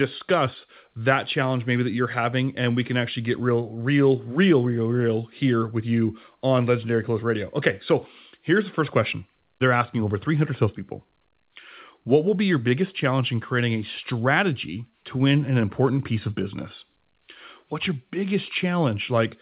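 No technical faults can be heard in this speech recording. It has come through a WebRTC call path whose narrowband sound, with nothing above 4 kHz, fits the G.711 A-law telephone codec.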